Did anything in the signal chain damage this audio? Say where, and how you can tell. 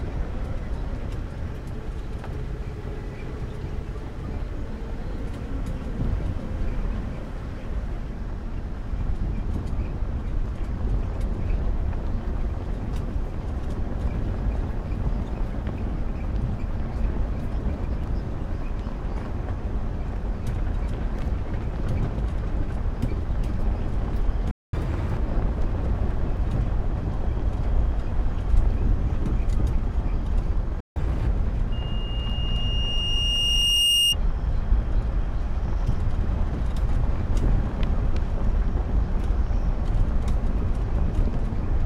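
Yes. There are two playback stalls where the sound simply drops out: 24.51 to 24.73 s, about 0.22 s, and 30.80 to 30.96 s, about 0.16 s. That points at the playback or buffer stage, likely a player that ran dry or had its thread blocked.

Right after each gap you get catch-up at higher speed: 24.73 to 25.17 s and 30.96 to 31.27 s play at 1.5x, with pitch up around seven semitones. The player is resampling its backlog to win back the time it lost in the stall.

Then there's loudspeaker feedback squeal from 31.72 to 34.16 s. A single 2.8 kHz tone swells over roughly two seconds and ends up about 5 dB above the signal. That's the acoustic loop, with the mic hearing its own speaker and that one frequency running away.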